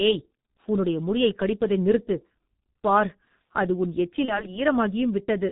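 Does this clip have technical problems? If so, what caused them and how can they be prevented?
Yes. Throughout, the speech carries heavy G.723.1 codec damage at about 6.3 kbit/s: nothing above 4 kHz, a hoarse, muffled tone and smeared consonants from its slow 30 ms frame updates. Unlike a plain low-pass filter, the roughness and blurring come from coarse parametric coding, not just missing treble. Using a wideband codec at a higher bitrate would prevent this.

From 4.25 to 4.58 s there is VoIP packet loss concealed by the speech codec. The gap sounds like a single 30 ms frame went missing. The decoder filled it by extending the last pitch and filter, producing a brief stretched sound, then weak, distorted speech for about 0.3 s while its frame-to-frame state recovered. A clean dropout would leave silence or a click instead of this smeared tail. A jitter buffer, forward error correction or a more reliable network path would prevent it.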